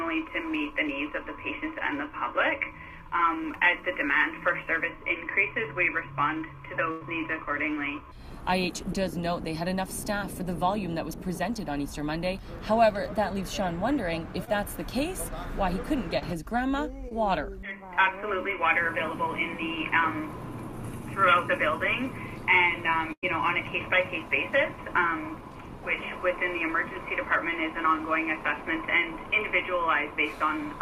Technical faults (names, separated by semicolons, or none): burst of packet loss; short concealed packet loss